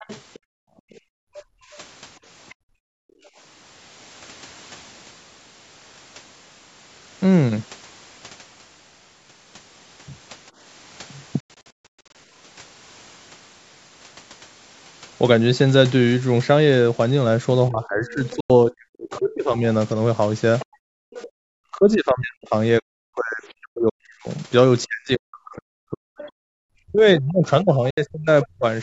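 From 0 to 3.3 s the echo canceller likely failed to remove all of the loudspeaker signal, so the other side's voice leaks through faintly, around 25 dB under the talker. Between 0.39 and 3.34 s the canceller also gates the background, clamping the microphone by about 40 dB so the room sound drops out for roughly two seconds in total.

At 11.40 to 12.15 s, audio packets likely missed their delivery deadline to the Bluetooth headphones. This Bluetooth dropout leaves scattered silent holes adding up to about 511 ms, the longest run 139 ms, and the sound picks up later each time as though it had kept playing.

From 17.68 to 19.65 s both sides talk at once and the canceller, likely unable to separate its own talker from the echo, turns everything down. The result is speech suppressed in double talk, dipping by as much as 40 dB across about one and a half seconds. The other side's voice leaks through again from 18.1 to 21.27 s, about 20 dB below the talker. 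Inside that stretch another Bluetooth dropout cuts a 93 ms hole at 18.40 to 18.50 s. Between 20.65 and 21.44 s the background is gated once more, dropping by about 40 dB for around 0.7 s.

From 21.72 to 28.65 s the double-talk suppression returns, taking the talker's speech down by up to about 40 dB for roughly five seconds in pieces. A brief scrap of the other side leaks through at 26.2 to 26.3 s, some 25 dB down. The background is gated for about 0.1 s at 26.49 s, and a final Bluetooth dropout blanks 70 ms at 27.90 to 27.98 s.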